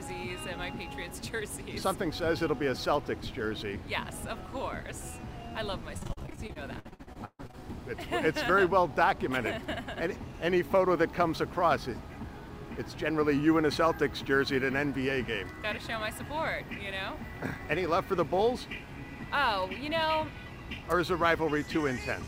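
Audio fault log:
5.97–7.55 s, repeated packet loss (robotic sound): Lost audio is patched by extending the previous sound, about 38% of this stretch. Gaps last up to 137 ms, so it sounds choppy and robotic.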